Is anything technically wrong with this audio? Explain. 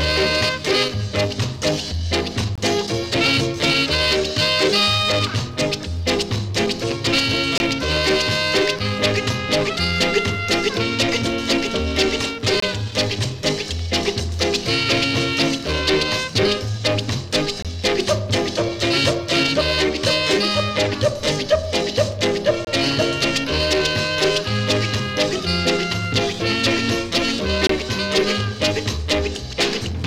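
Yes. There is a gap between chunks at 2.55, 7.58, 12.60, 17.62, 22.65 and 27.67 s. The audio arrives in 5 s chunks, and each join gets a 23 ms silent hole. Each hole is a brief dropout on a steady beat.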